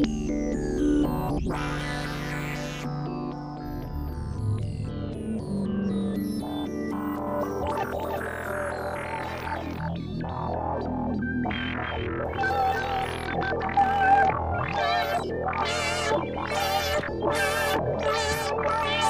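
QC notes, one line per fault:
7.27–13.15 s, doubled audio track: the signal is likely being captured a second time through a slower path, so a duplicate lands in the mix about 300 ms behind the original and roughly 5 dB quieter. Because the copy is a clean full-band repeat with no decay or room colour, it reads as a hard, distinct echo rather than reverb, and it cuts in and drops out abruptly at the edges of this span.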